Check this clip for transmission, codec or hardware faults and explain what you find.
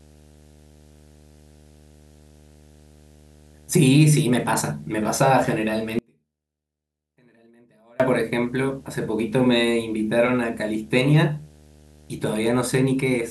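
Two faults are present in this speech clip: a constant video or display buzz, and one audio dropout to a faint residue.

Video or display buzz runs through the whole clip, about 30 dB below the speech. It is a buzz at 75 Hz with a hashy, gritty edge above it, which fits a monitor or video cable radiating its field-scan pulses into the audio wiring. Mains hum would sit at 50 or 60 Hz and sound smoother. This buzz is rasp-like, with a 75 Hz fundamental that matches a display refresh rather than a power supply.

The audio dropout to a faint residue runs from 5.99 s to 8.00 s, so about 2.0 s of the speech is lost. The speech cuts off abruptly in mid-flow and comes back just as suddenly. During the gap, a faint trace of the sound remains at about 35 dB down. The likely cause is that the wanted signal was broken upstream while the later stages stayed live, letting only leakage through. A natural pause or a fade would not behave this way. 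The signal drops instantly, and the gap is not true silence because the residue stays audible.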